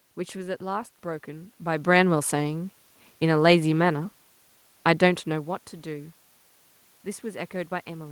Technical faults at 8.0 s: none

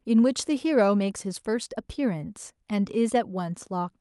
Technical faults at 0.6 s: none

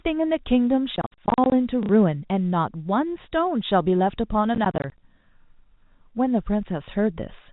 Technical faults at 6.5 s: none

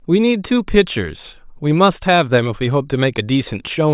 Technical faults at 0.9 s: none

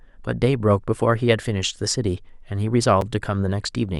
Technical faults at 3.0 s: gap between stream segments

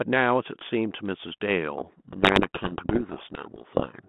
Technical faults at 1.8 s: codec payload misread

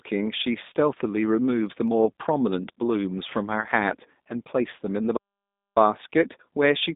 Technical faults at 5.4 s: G.729 codec; playback stall

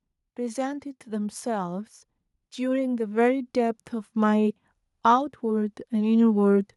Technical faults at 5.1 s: automatic gain rising

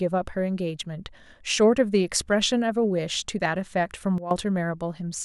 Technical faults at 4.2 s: sudden gain jump

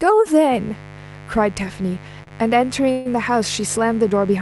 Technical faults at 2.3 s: mains buzz; short stall from a late packet

